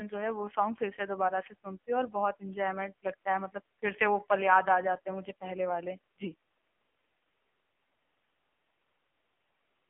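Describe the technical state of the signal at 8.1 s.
At 8.1 s the speech carries AMR narrowband mobile codec damage, present throughout. The band runs only from 250 Hz to 3.4 kHz. Each 20 ms frame is rebuilt from a vocal-tract model and a few pulses. The heavy, buzzy, synthetic tone fits about 5.9 kbps.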